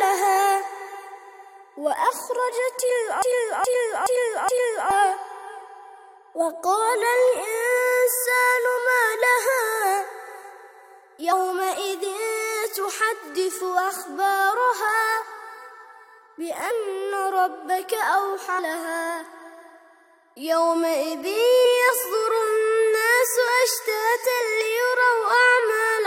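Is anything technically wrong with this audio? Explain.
Yes, there are two kinds of fault.

Broken-record loop, from 3.22 to 4.91 s. The playback path likely stalled and kept resending the last fragment it had buffered. A 0.42 s piece of sound plays four times back to back, identical each time, so the passage stutters mechanically instead of moving forward. The audio that belonged in that stretch never arrives and is lost.

Compressed frames skipped, at 11.31 s, 16.70 s, 18.58 to 18.60 s and 21.64 s. Each time, whole blocks of compressed audio go unplayed, either missing or rejected by the decoder as damaged, and the sound jumps ahead. The gaps are roughly 70 ms, 300 ms, 300 ms and 150 ms, made up of 23.2 ms frames.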